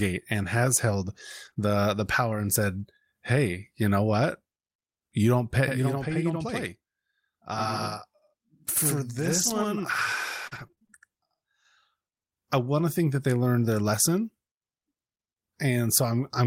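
At 1.45 to 1.47 s a lost packet is rebuilt from error correction. The decoder plays a low-bitrate copy carried in the next packet, so nothing drops out. The 20 ms frame just turns briefly rougher and noisier. Unlike concealment, there is no smear.

Right after "and has held", from 1.49 to 1.58 s, come two back-to-back short concealed packet losses of about 20 ms each. The receiver extends the preceding sound and then blends back, leaving a brief smear or wobble just before "the the power and". Here the audio is guessed, not decoded from a copy.

The same error-correction roughness returns at 2.80 to 2.82 s and again at 13.20 to 13.22 s, each a single 20 ms frame.

From 5.68 to 11.65 s, starting after "don't pay", one channel runs 85 ms late, which fits a 4096-sample buffer at 48 kHz. Summed to mono, this channel delay causes doubling: a distinct slap at equal level, not a decaying room tail.

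Inside that stretch, from 9.22 to 11.10 s, repeated packet loss produces robotic sound. Ten holes, the longest 35 ms, are patched one after another, covering about 11% of the span. The result is choppy, with pieces missing and the gaps recurring rather than isolated.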